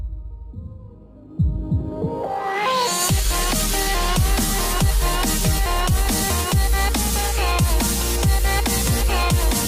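Channel delay (comb filtering) runs from 0.80 to 2.14 s. One channel arrives slightly late, by roughly one sample or about 0.02 ms, and when the two channels are summed to mono, whatever they share cancels at evenly spaced frequencies. With so short an offset, the first cancellation sits near 20 kHz, so the audio loses some air and sounds a little dull at the very top.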